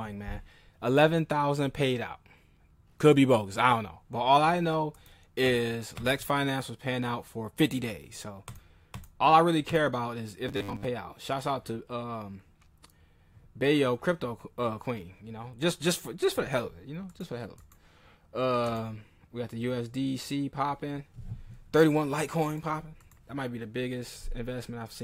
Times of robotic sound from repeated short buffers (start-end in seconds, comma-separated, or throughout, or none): 10.49-10.85